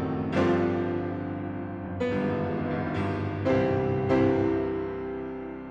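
No technical fault can be heard anywhere in this audio. Nothing in it calls for a timestamp or a cause.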